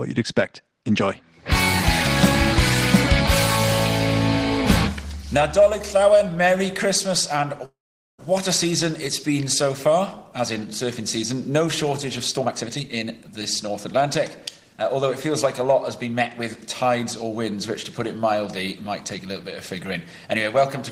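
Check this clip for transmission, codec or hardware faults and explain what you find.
There are two transmission faults: a call audio freeze, then two stretches of jitter buffer speed-up.

From 7.65 to 8.20 s there's a call audio freeze, likely from packets held up in transit that drained the jitter buffer. The last sound carries on as a brief fading buzz or hiss and then about 440 ms of silence. The audio resumes where it stopped, so nothing is lost, just delayed.

Jitter buffer speed-up follows as the receiver works off a backlog by cutting out tiny pitch-period slices, which speeds things up with no pitch change. From 12.37 to 13.07 s it runs at 152%, dropping roughly 0.4 s and sounding noticeably rushed. From 14.73 to 17.25 s it's a gentler 105%, losing about 150 ms, so it's only slightly hurried.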